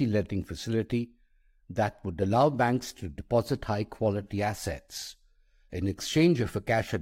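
A speech recording, and nothing is technically wrong with it.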